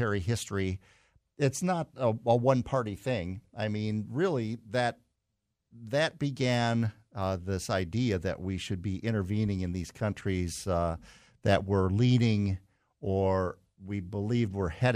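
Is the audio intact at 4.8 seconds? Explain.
Yes, the speech at 4.8 seconds plays through cleanly with no audible dropout, click, distortion or other break in the signal.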